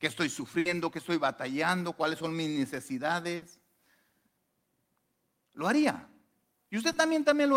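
At 0.59–0.74 s and 3.36–3.44 s, a burst of packet loss replaces about 60 ms of speech with a fading continuation of the last sound. On a spectrogram, the continued sound decays before the audio resumes further on.

At 6.92 s, a short concealed packet loss patches 20 ms with synthesized continuation, heard as a brief smear. In the waveform it shows as a slightly smoothed splice.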